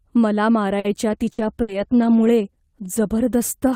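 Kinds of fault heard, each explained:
Short stall from a late packet: Around 0.79 to 0.87 s, a packet arrived late and the jitter buffer ran dry. The receiver held the last sound for about 50 ms while it waited. It then carried on from exactly where it stopped, so nothing is lost. The sound is drawn out with a faint buzz or dip, and everything after it plays about 50 ms later than before.
Call bitrate drop: From 1.12 s to the end, the encoder is pushed from 40 kbps down to 15 kbps. This happens because the call's bandwidth estimate fell. It sits at its lowest for about 1.15 s. With far fewer bits, the coding turns coarse. The sound becomes rough and watery, and it loses brightness as the upper frequencies are trimmed. It does not recover before the clip ends.
Burst of packet loss: Two short runs of audio are lost, at 1.32 to 1.41 s and 1.62 to 1.71 s. Both fall inside the low-bitrate stretch. 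In each, the receiver stretches the last sound for about 60 ms and fades it. This gives a held buzz or a dying hiss. Playback then jumps ahead, and about 60 ms of real audio is missing each time.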